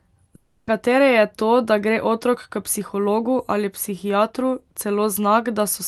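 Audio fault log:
0.35–0.69 s, long network dropout: the speech gives way to a buzzy continuation of the last sound that fades over about 0.32 s, then resumes with that stretch missing, likely from lost packets the receiver concealed. The spectrogram shows smeared, repeating harmonics decaying, and the waveform shows a tapering envelope.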